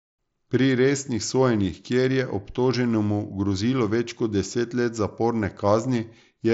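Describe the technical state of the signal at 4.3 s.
At 4.3 s the speech is intact, with nothing above about 7.7 kHz as expected from the Bluetooth mSBC headset path it travels through.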